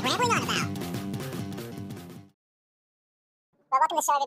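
The reader treated each pair of samples as a single frame, so the audio was read two samples at a time (double speed) for the whole clip. Everything runs twice as fast and a full octave, 12 semitones, higher.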